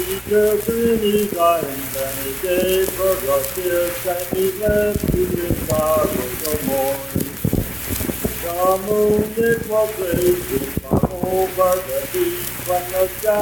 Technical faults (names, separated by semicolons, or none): Bluetooth stutter